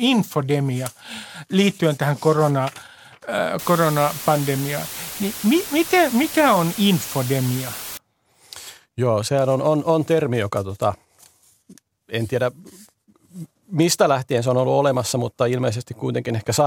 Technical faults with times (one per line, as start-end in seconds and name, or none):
3.59-7.97 low bit depth with dither